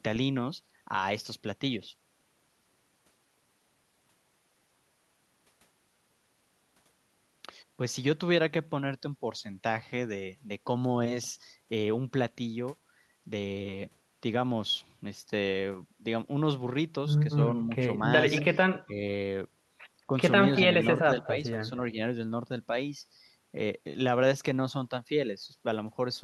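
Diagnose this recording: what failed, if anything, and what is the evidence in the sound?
Echo leak, in the call processing stage. Short delayed copies of the speech, trailing by 226 ms, surface at 18.36–18.42 s, 20.56–20.60 s and 21.23–21.28 s. They sit about 15 dB below the talker, and about 20 dB below in the last one. An echo canceller likely let loudspeaker pickup through and sent it back.

Speech suppressed in double talk, also in call processing. The talker's level drops sharply, by around 20 dB, for roughly 70 ms at 18.84–18.91 s, then dips only slightly, by a few dB, at 20.07–20.12 s. The likely cause is the canceller treating overlapping speech as echo and attenuating it.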